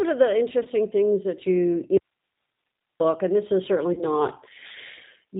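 Throughout, the speech sounds band-limited and slightly rough and synthetic, with nothing above 4 kHz. That is the G.729 codec at 8 kbit/s, which rebuilds each 10 ms frame from a vocal tract filter, a pitch predictor and a few pulses, and the damage is plainly audible.

From 0.63 to 0.68 s the sound briefly smears into a fading, stretched sound and stays weak for a moment afterward. This is VoIP packet loss concealed by the speech codec. About 20 ms of audio went missing, which fits one lost packet, and the decoder extrapolated from its last pitch and filter while lowering the gain.

From 1.97 to 3.0 s the signal cuts out abruptly, leaving only hiss about 50 dB below the speech level for roughly a second before it snaps back in mid-flow. This is an audio dropout to a faint residue. The wanted signal was likely lost while the path after the break stayed live.

From 3.93 to 4.03 s the same stretched, fading decay returns, about twice as long. 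About 40 ms was lost here, which points to two consecutive packets. The codec's concealment again carried the last frame forward and faded it.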